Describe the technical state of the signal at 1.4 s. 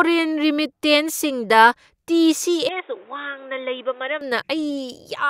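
At 1.4 s the speech signal is intact, with no dropout, clipping, distortion or other fault to be heard at that moment.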